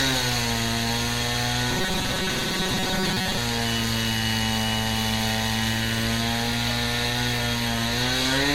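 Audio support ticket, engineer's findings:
Generation loss, whole clip: swirly, hollow texture with blurred attacks and nothing above 17 kHz. Far more smeared than one AAC-LC pass at 96 kbit/s would leave, which points to roughly four encodes, likely from repeated re-encoding. Not a simple low-bitrate encode.

Robotic sound from repeated short buffers, 1.71–3.37 s: rigid metallic buzz at 188 Hz, fixed regardless of the sound. Fits a 5.3 ms block replayed while about half the real audio is skipped, likely buffer underrun. Steady buzz with no silent gaps, so not plain dropouts.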